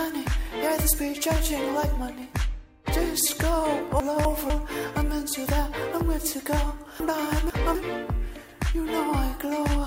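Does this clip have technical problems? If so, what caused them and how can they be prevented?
Yes. Chunks out of order occur at 4.0–4.5 s and 7.0–7.75 s. A 250 ms chunk plays one position late, then two late, jumbling the sound. Unlike a dropout, nothing is missing. Reorder chunks by sequence number before playback.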